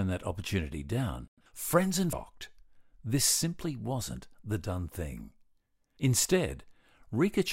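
At 2.13 s, right after "opportunity down friends and", the speech jumps ahead with a small blip, likely a stream segment skipped, losing a chunk of the talk.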